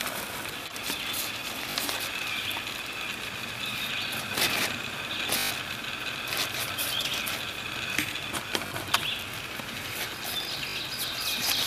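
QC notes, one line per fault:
1.71–1.75 s, 5.38–5.51 s, 8.67–8.71 s, 10.70–10.76 s: Bluetooth stutter. Short dropouts of 40.6, 121.9, 40.6 and 61.0 ms, where late or missing packets left the receiver replaying its last slice. The 5.38 s gap, the longest, is a brief machine-gun buzz. The others are quick hiccups. On a waveform each gap shows a short block repeated. On a spectrogram it shows evenly spaced vertical striping before the sound resumes slightly ahead.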